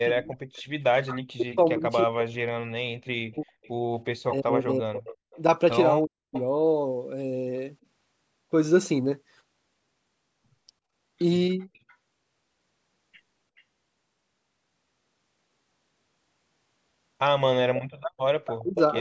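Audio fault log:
0.05–6.35 s and 18.58–18.97 s: speech suppressed in double talk. The speech dips by up to about 40 dB, for roughly four seconds in all in the first span. Late on it drops by about 30 dB. The likely cause is an echo canceller turning down both its own talker and the loudspeaker echo while both talked.
0.56–0.62 s, 3.32–6.41 s, 11.6–11.95 s, 13.57–13.62 s and 17.75–18.79 s: echo leak. A delayed copy of the speech returns 335 to 403 ms late. It is faint in the short scraps, about 40 dB down. It grows to only about 10 dB down near the end. This is likely loudspeaker echo that the canceller missed.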